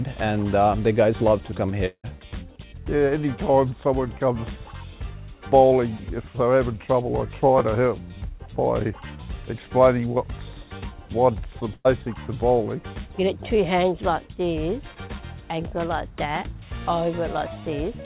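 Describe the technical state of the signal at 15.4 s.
At 15.4 s the audio is intact, with nothing faulty happening there, though it comes through the call path with no content above 4 kHz, the narrowband limit that fits G.711 mu-law at 64 kbps.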